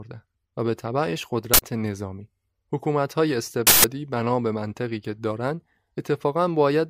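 A buffer reached the output before any audio had been written into it, so whatever stale memory it held was played as samples: an uninitialised buffer fault. It strikes twice in this speech, at 1.54 s for about 85 ms and at 3.67 s for about 170 ms, each a sudden, loud burst of digital noise replacing the sound. The lengths fit blocks of 4096 and 8192 samples.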